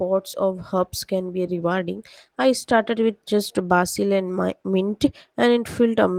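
At 1.47 to 1.49 s the speech makes a skip ahead. Roughly 400 ms of audio never plays, and the two sides are butted together with no fill, so a chunk of the utterance vanishes and the delay drops by about the same amount. The waveform shows an abrupt seam where the envelope jumps, and the spectrogram shows harmonics and formants changing in one step with no transition.

Right after that comes a jitter buffer speed-up. From 1.57 to 1.86 s it plays at 113%, trimming about 50 ms, and from 2.28 to 3.10 s it plays at 107%, trimming about 70 ms. The receiver is shedding excess buffered audio by cutting out short pieces of one or a few pitch periods, one after another. Pitch holds steady but the delivery sounds hurried. The spectrogram shows time-compressed syllables with normal harmonic spacing, and the waveform shows periodic cycles of normal length with some of them removed in sequence.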